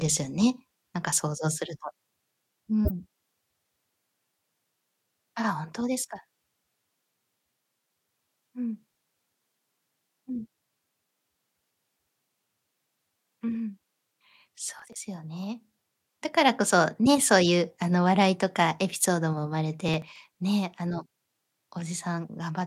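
Speech, with two kinds of fault. At 2.85 to 2.91 s a corrupt frame is decoded: damaged bits are played as though valid, so a brief chirp, blip or burst of noise with energy at the wrong frequencies lasts about two codec frames. Unlike a dropout or click, it adds odd tonal content rather than silence or a single spike. Processor overload crackle appears from 14.79 to 14.98 s and again from 19.88 to 20.34 s. Repeated missed deadlines skip short chunks, which fits buffers of roughly 10 ms, leaving many hard-edged gaps that blur into gritty tearing riding on the speech. A codec fault would be one short event, but this lasts as long as the load and stops when it passes.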